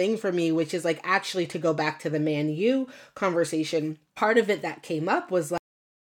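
At 5.58 s, right after "of it that came", the speech stops mid-sound: a cut-off end, where the final buffers were never written, leaving abrupt digital silence without decay.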